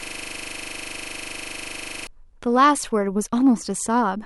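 Right from the first instant, already under way as the clip opens and lasting until about 2.07 s, there's a system hang loop. The machine or its driver froze while the audio hardware kept replaying the same 40 ms slice of its ring buffer, roughly fifty times over. With a segment that short, it comes across as a steady, rough buzz at 25 Hz, not a stutter, and the speech only resumes once the system recovers.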